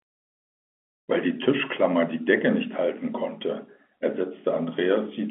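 Speech carried over a telephone-band line, with nothing technically wrong with it.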